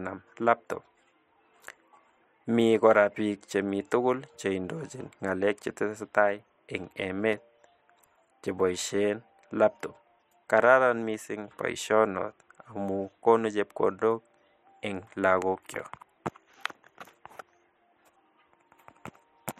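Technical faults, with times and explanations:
6.84–8.55 s, CD scratch ticks: eight short ticks at a steady rate of roughly five per second, each a small click or momentary gap of only a few milliseconds. A scratch or blemish on the disc destroyed more data than error correction could rebuild, once per revolution, so the player had to interpolate or mute those samples, leaving a brief discontinuity in the speech each time the damaged spot passed the laser.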